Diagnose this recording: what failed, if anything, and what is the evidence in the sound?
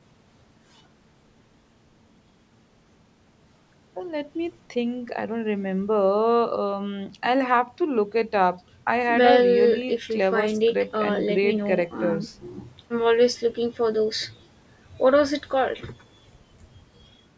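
Nothing failed; no fault is audible in this speech.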